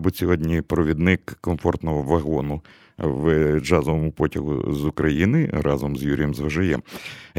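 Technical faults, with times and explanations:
No technical faults detected.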